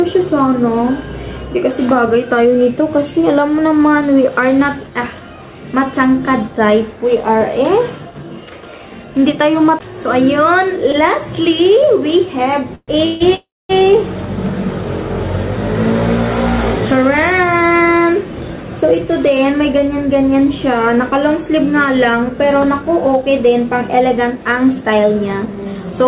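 At 10.92 to 11.09 s one sound is held about 16 ms too long, with a small buzz or dip. This is a short stall from a late packet: the jitter buffer ran empty, the receiver stretched the last sound, then resumed without losing anything.

Three call audio freezes follow, each carrying the last sound on as a fading buzz and then picking up where it stopped. The first runs from 12.75 to 12.90 s (126 ms, ending in about 30 ms of silence), the second from 13.06 to 13.22 s (146 ms, no silence), and the third from 13.34 to 13.71 s (350 ms, with 230 ms of silence). Packets were likely delayed in transit, emptying the jitter buffer.

The audio then sounds hurried at the same pitch three times. From 17.05 to 18.64 s it runs at 110% speed, with around 150 ms removed. From 22.42 to 23.46 s it runs at 108%, with about 100 ms removed. From 24.24 to 25.75 s it runs at 109%, with roughly 150 ms removed. This is a jitter buffer speed-up: the buffer held excess audio, and the receiver trimmed many short pitch-period pieces to cut the delay. 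Throughout, the call path's band limit is audible, with nothing above 4 kHz, which fits G.711 mu-law at 64 kbps.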